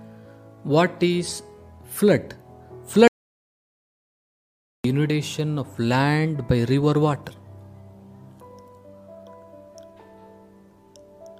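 An audio dropout to silence runs from 3.08 to 4.84 s: the sound cuts off abruptly and about 1.77 s of silence follows, with no room tone at all, before the audio resumes mid-flow. The likely cause is a lost input feeding zeros to the recorder.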